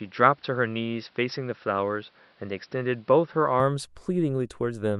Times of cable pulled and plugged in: none

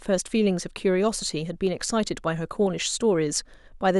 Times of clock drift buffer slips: 0.67-3.67

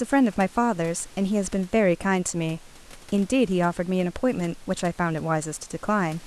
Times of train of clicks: none

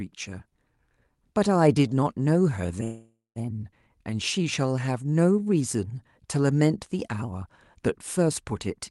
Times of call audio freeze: 2.83-3.39

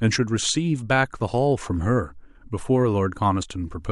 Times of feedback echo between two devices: none

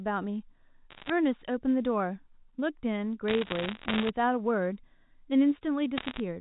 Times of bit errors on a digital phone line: 0.90-1.10, 3.28-4.10, 5.97-6.20

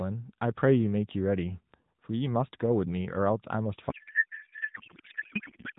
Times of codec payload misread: 3.90-5.78

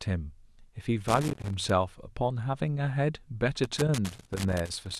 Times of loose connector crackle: 1.08-1.70, 3.64-4.99

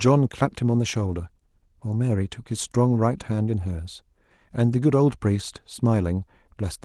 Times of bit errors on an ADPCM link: none

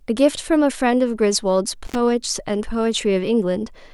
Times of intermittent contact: 1.85-1.95

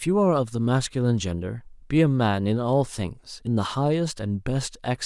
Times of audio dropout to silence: none

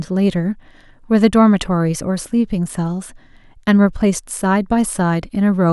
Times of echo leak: none

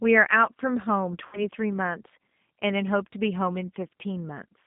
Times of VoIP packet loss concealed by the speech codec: 1.27-1.45

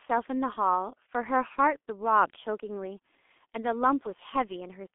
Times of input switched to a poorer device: none

